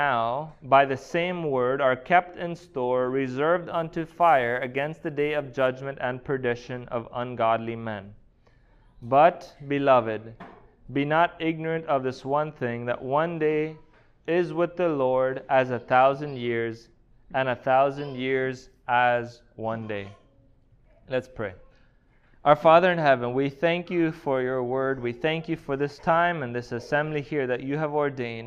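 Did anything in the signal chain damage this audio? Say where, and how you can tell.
Yes, at the converter. Between 3.72 and 5.67 s there's sample clock jitter: a gritty hiss riding on the sound, strongest on loud, bright parts and gone in the gaps. An unstable clock, wobbling by a microsecond or so, mistimes samples, leaving errors about 40 dB down.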